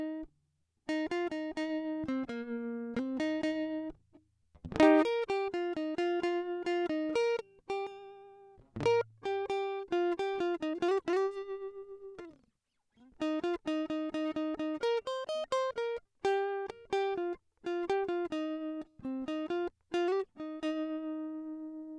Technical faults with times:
none

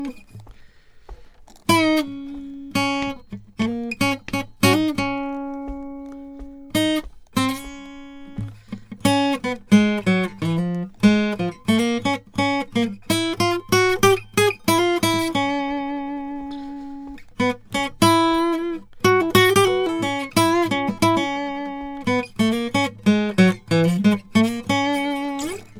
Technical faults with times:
0.00-25.79 generation loss

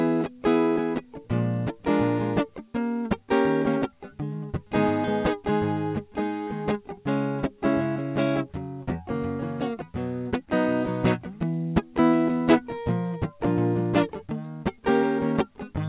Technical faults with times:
none

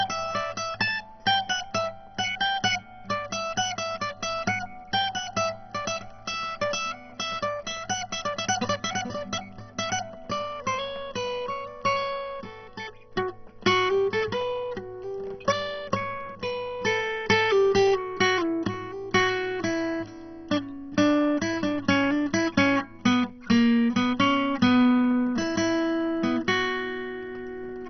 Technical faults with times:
0.00-27.90 MP2 compression

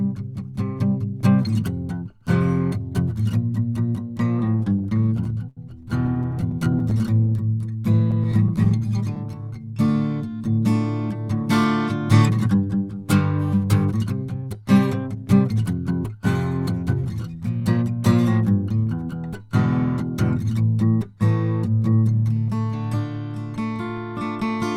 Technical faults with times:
4.39-7.30 repeated stalls (stutter)
7.01-9.88 jitter buffer slow-down
8.11-8.82 repeated stalls (stutter)
11.64-18.12 jitter buffer speed-up

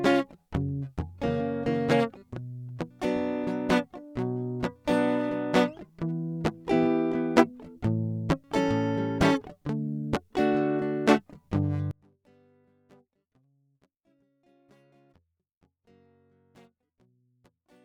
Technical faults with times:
11.91-17.84 one channel inverted

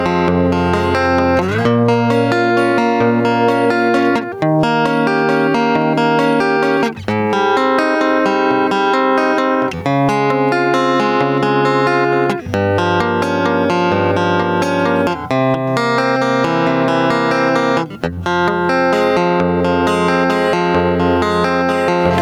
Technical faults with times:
0.00-22.21 gain pumping

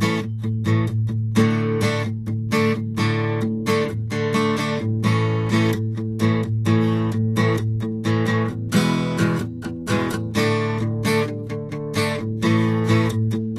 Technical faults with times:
0.00-13.59 Vorbis compression

